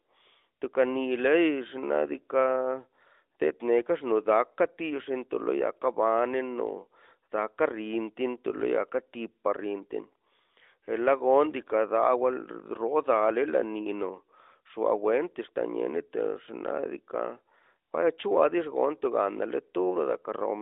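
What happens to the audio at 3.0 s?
Nothing goes wrong at 3.0 s: the speech there comes through intact, carried on the narrow 300 Hz to 3.7 kHz band of the AMR-NB mobile codec at 12.2 kbps with no break or disturbance at that moment.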